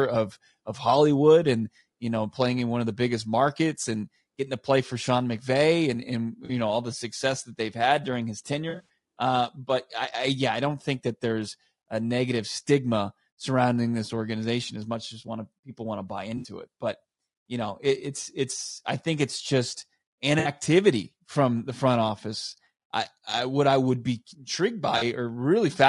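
Low-delay AAC compression, throughout: the speech is rough and grainy, with noise filling the gaps between harmonics and a thin, synthetic-sounding top band. This is likely AAC-ELD, whose short frames resolve pitch harmonics poorly, and the damage points to a bitrate near 32 kbps.

AAC frame loss with concealment occurs at 6.45–6.51 s, at 8.69–8.82 s after "they've had during his", at 16.37–16.47 s, at 20.39–20.49 s after "I think it's just", and at 24.97–25.03 s after "I would be intrigued". Each time, missing frames were rebuilt from the last good spectrum, giving a brief smeared, noisy or phasey patch, of 40 to 60 ms in the other four. At 8.69 s the losses add up to 140 ms, scattered over 200 ms in runs of at most about 40 ms.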